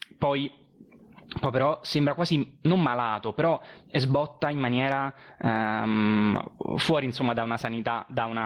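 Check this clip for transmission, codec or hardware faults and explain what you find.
One fault is present: gain pumping, throughout the whole speech clip. The gain is pulled down on each loud syllable, swinging by around 25 dB. The likely cause is input gain set far too high, with a fast limiter clamping it down. The waveform shows flattened peaks of even height.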